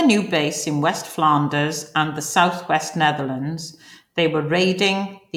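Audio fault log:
Nothing stood out on listening to this speech recording.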